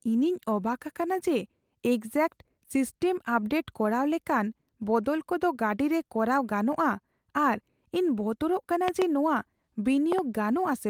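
Two loud pops cut into the speech, at 8.88 to 9.04 s and again at 10.12 to 10.21 s. Each is a double pop, two sharp thumps in quick succession, peaking about 15 dB above the speech, which continues underneath. The cause is likely a brief voltage pulse entering the signal chain, such as from a connector, switch or static discharge, which the downstream circuitry then shapes into these short transients.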